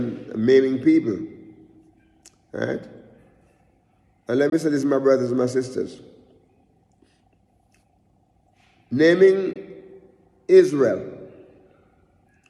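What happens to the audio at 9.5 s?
A brief hole opens from 9.53 to 9.57 s, then the audio resumes as if it had played on. This is a Bluetooth dropout, likely one packet arriving too late.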